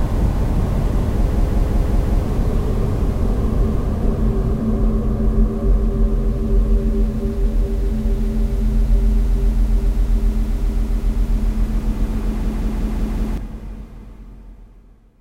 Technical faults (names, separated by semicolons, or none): system hang loop